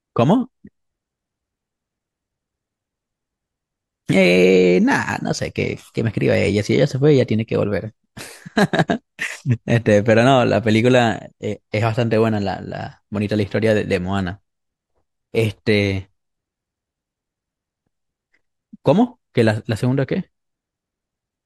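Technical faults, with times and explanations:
5.33 s, underrun with held sample: the output buffer ran dry for 2 ms, and the converter froze the speech waveform at its last value, leaving a brief flat step. A couple of milliseconds of live audio were lost.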